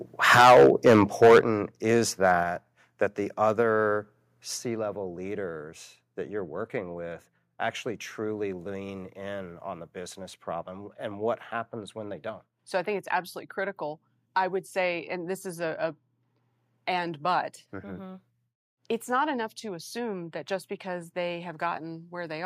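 Speech recording. An input level that was likely set too high caused microphone overload from 0.32 to 1.39 s, about 12 dB over, clipping roughly a tenth of samples, and again at 2.24 to 2.32 s, about 1 dB over, leaving a harsh crackle on the peaks. The microphone volume was then stepped down, likely by the call software reacting to the overload, at 0.41, 1.41, 2.43, 3.63 and 4.65 s, by about 2, 8, 3, 2 and 2 dB, so the level drops abruptly each time.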